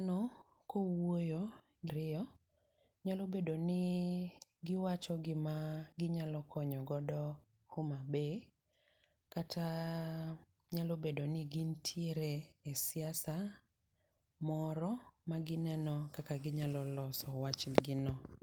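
At 1.89–1.91 s a skip ahead drops roughly 0.4 s of speech, likely discarded by an overflowing jitter buffer, and both sides join abruptly with no gap. From 1.99 to 3.66 s a jitter buffer speed-up trims pitch periods, about 0.2 s in total, to reduce the delay. The speech runs at 112% speed and unchanged pitch, so it sounds hurried.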